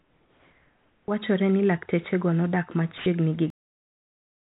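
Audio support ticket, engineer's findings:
Comfort noise in place of the background, 0.00 to 1.08 s. Steady, featureless hiss, about 6 dB quieter than the real background. Likely discontinuous transmission: the sender's voice detector stopped sending and the receiver synthesised noise.

Onset clipped by the voice detector, 1.06 to 1.08 s. First 20 ms of sound missing, start abrupt. Detector was likely slow to re-trigger, so comfort noise covered the beginning.

Sound dropped by the voice detector, 2.98 to 3.06 s. 80 ms of sound replaced by flat noise. Detector likely misjudged the sound as background and paused sending.

Cut-off end at 3.50 s. Audio stops mid-sound into digital silence, no decay. Final buffers never written or played.

Call codec path band-limited, nothing above 4 kHz, consistent with G.711 mu-law at 64 kbps.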